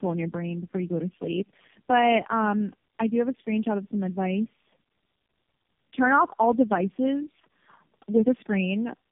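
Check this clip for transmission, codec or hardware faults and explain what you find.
One fault runs through the whole speech clip: tandem speech coding. Throughout, the speech sounds rough, muffled and warbly, with nothing above 3.5 kHz. The sound points to three low-rate speech coders in a row, each re-encoding the previous one's decoded, already degraded output, so their damage compounds.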